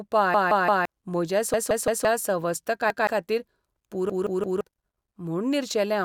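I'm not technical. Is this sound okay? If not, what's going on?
No. The playback device repeatedly ran out of fresh audio, so it replayed the last chunk it had, a fault called a repeated buffer. Each chunk is about 0.17 s long, which fits an 8192-sample buffer. The speech stutters, with the same snippet heard again with a hard join, at 0.34–0.85 s, 1.54–2.05 s and 4.10–4.61 s (three extra plays, roughly half a second lost each) and at 2.90–3.07 s (one extra play).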